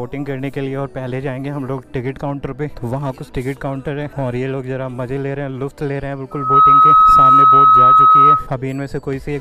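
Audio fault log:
6.31–8.50 s, loudspeaker feedback squeal: a single tone at 1.3 kHz swells up over roughly a third of a second and then holds as a piercing squeal, sitting about 15 dB above the rest of the sound until it cuts off. The microphone is hearing the loudspeaker it drives, and at this frequency the loop gain passes one, so the tone keeps feeding itself. On a spectrogram it shows as one bright horizontal line at 1.3 kHz, and the waveform's envelope swells sharply there.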